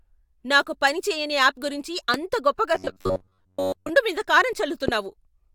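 A voltage spike, likely from a switch, plug or driver glitch, puts a loud pop into this speech clip at 2.14–2.16 s and again at 4.88–4.91 s. Each is a single sharp click standing around 15 dB above the speech, which carries on beneath it. From 2.75 to 3.89 s, audio likely arriving too seldom leaves the playback repeating short buffers in place of most of the real signal, producing robotic sound from repeated short buffers. The repeats impose a rigid metallic buzz at 93.8 Hz, which fits a buffer about 10.7 ms long, while the speech's rough contour still shows through.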